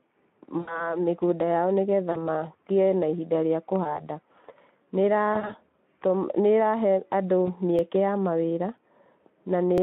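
Speech in which the sound briefly smears into a fading buzzy tone or coloured noise at 0.59–0.97, 2.11–2.26, 3.83–4.00, 5.34–5.53 and 7.45–7.52 s. This is VoIP packet loss concealed by the speech codec, which extrapolates the lost 20–100 ms from the last pitch and filter. From 7.79 to 9.78 s, regular ticks about a second apart point to periodic USB or driver dropouts, each skipping a few milliseconds of audio.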